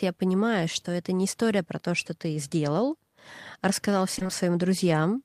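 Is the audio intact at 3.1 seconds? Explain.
Yes, the speech is intact at 3.1 seconds, with no audible dropout, click, distortion or other fault at that moment.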